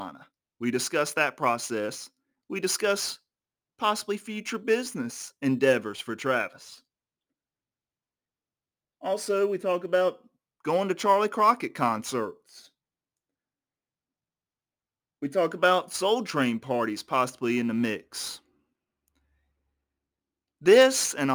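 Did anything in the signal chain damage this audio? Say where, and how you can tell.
Yes. Crude rate conversion runs through the whole clip, at the sample-rate conversion stage. A gritty, inharmonic fizz rides on the speech and grows with louder and brighter sounds, sitting only about 25 dB below the speech. The pattern fits a 48 kHz to 44.1 kHz change made by picking the nearest sample, with no filtering. Samples are dropped in a fixed repeating rhythm, and that timing jitter throws off tones unrelated to the speech.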